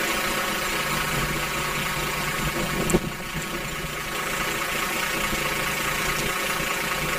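From start to finish the sound carries a robotic buzz near 92 Hz, the signature of planar audio read as interleaved. Each block of about 10.88 ms stores all left samples and then all right ones, but playback treats them as alternating pairs, so every block runs twice at double speed. Because the blocks are this short, the result is a steady buzz at the block rate rather than an octave jump, which is what sets it apart from a plain pitch or sample-rate error.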